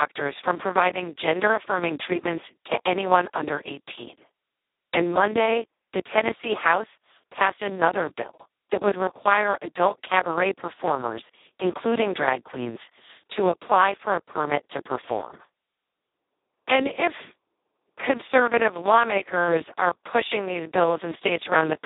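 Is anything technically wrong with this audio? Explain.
Yes. The whole clip has been through the Speex codec at a very low setting, around 2 kbps by the sound of it. With so few bits for the excitation the speech turns hoarse and robotic, confined to roughly 250 Hz to 3.7 kHz, with nothing above 3.8 kHz.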